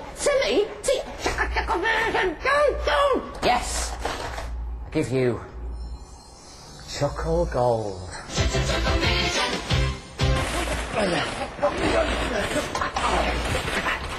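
No technical faults are audible.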